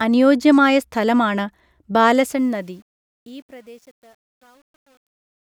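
Speech fading out from about 2 s to the end at 5.42 s. From 2.17 s the fade turns gritty, the quiet tail at its worst from 2.93 s onward. That is truncation distortion on the fade, consistent with a level stage keeping about 9 bits, undithered.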